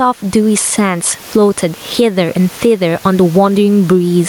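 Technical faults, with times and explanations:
Throughout, gain pumping: the gain swings by around 15 dB, while loud and quiet syllables sit squashed close together. The likely cause is gain set far too high with a fast limiter clamping down on each peak. On a waveform the peaks look flattened to one height, and a spectrogram shows the noise floor sitting about 32 dB under the speech.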